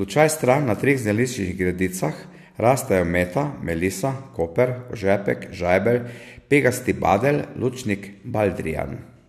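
No technical faults can be heard anywhere in this speech recording.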